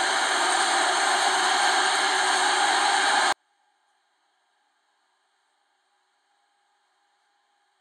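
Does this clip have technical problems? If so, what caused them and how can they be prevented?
Yes. At 3.33 s the sound abruptly drops by about 48 dB to near silence while staying clean through the end, a 24-bit alignment error: 24-bit samples sitting in the low bytes of 32-bit words were read as full 32-bit integers. Prevent it by declaring the exact sample format and left-justifying 24-bit data in 32-bit containers.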